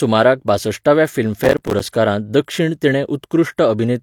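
From 1.44 to 1.80 s the speech breaks into processor overload crackle. The processor keeps missing deadlines for small buffers, which fits buffers of around 5 ms. About twenty drop out as short silent gaps with hard edges. The gritty tearing stops just before "दक्षिण तिणें".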